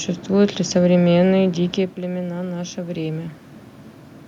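Automatic gain rising from 1.95 to 3.41 s in this speech clip: after the talker moved back around 1.5 s, dropping the level about 10 dB, the gain control crept up about 4 dB, swelling voice and room noise together.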